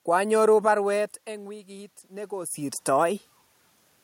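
From 0.92 to 3.27 s the automatic gain rising is audible: the input falls by about 18 dB as the talker moves away around 1 s, and the gain control slowly adds about 4 dB, so the speech and the room noise swell together.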